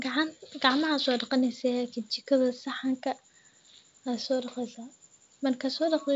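No technical faults can be heard in this speech recording. It has the wideband telephone sound of G.722 coding, with the speech carried up to about 7 kHz and at most a faint hiss in the upper band.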